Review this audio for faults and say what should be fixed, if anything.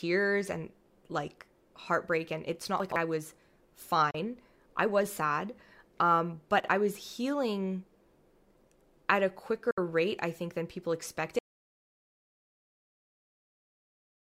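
Chunks out of order at 2.80 to 2.96 s, between "heartbreak and it's not" and "I was", and at 6.60 to 6.68 s, just before "I was healing". In each, a 40 ms block plays late: by three blocks in the first, by one in the second. The sound jumbles briefly at the hard joins. Prevent it by sequence-numbering buffers and reordering them before writing.

Digital broadcast dropout at 4.11 to 4.15 s, just before "I was sad", and at 9.71 to 9.78 s. The receiver mutes with a fade of about 3 ms when frames fail. It loses 32 ms in the first hole, which fits one frame, and 64 ms in the second, which fits two. Prevent it with stronger reception or error protection on the broadcast link.

Audio dropout to silence from 11.39 s to the end. The sound cuts out mid-flow and leaves silence with no room tone. This was likely caused by a lost or disconnected input while recording continued. Prevent it by securing connections and monitoring input levels during capture.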